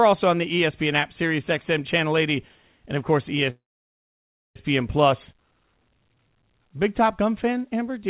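At 3.5 s the speech hits a call audio freeze. A short fading tail gives way to nearly a second of silence until 4.56 s, then picks up exactly where it stopped with nothing lost. It's likely a jitter buffer running dry while packets were held up.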